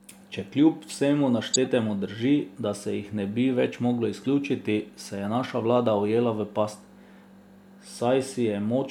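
Speech clip with two corrupt frames decoded: the decoder played compressed frames with flipped bits, so misread codes and gains put energy at the wrong frequencies. From 1.53 to 1.56 s, just before "drži da se jih", a handful of frames hit and give a loud glitch peaking around -5 dBFS. At 4.24 s, after "ne bi več moglo", a couple of frames produce a much quieter glitch. On a spectrogram each shows as a short, frame-length smear of misplaced energy; the waveform shows the first as a sharp spike.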